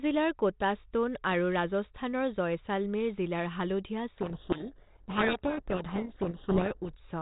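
From 4.16 to 6.9 s a codec payload misread buries the speech in harsh distortion, likely the G.726 code words being unpacked in the wrong bit order.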